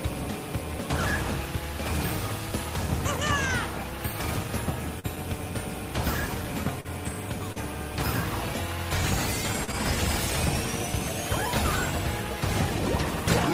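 Short concealed packet loss affects the audio at 4.99–5.06, 6.81–6.87, 7.52–7.59 and 9.64–9.70 s. At each point, 40 ms never arrived and was patched by extending the preceding sound, heard as a brief smear.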